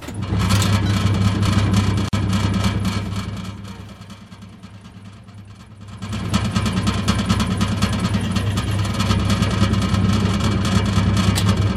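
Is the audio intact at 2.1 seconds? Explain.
No. From 2.09 to 2.13 s the sound drops into a 44 ms gap with smeared edges before resuming where it stopped: a gap at a join of separately encoded pieces, left by encoder delay and end padding.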